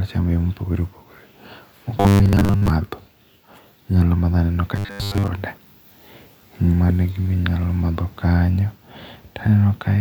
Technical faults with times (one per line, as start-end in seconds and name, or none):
2.00-2.73 robotic sound from repeated short buffers
4.76-5.28 robotic sound from repeated short buffers